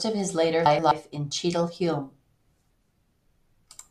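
Just after "of his later", from 0.66 to 0.92 s, frames arrive out of order. Two adjacent 128 ms blocks, which fits runs of four frames, play with their halves swapped, giving a garbled flutter. A second swap of two 64 ms blocks, consistent with two frames each, occurs from 3.25 to 3.38 s. On a spectrogram, formant tracks jump abruptly at each join, and no time goes missing.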